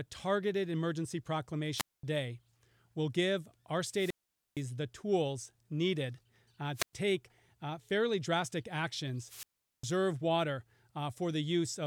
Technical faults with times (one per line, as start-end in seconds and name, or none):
1.74-2.03 wireless microphone squelch dropout
3.91-4.65 wireless microphone squelch dropout
6.74-6.93 wireless microphone squelch dropout
9.19-9.98 wireless microphone squelch dropout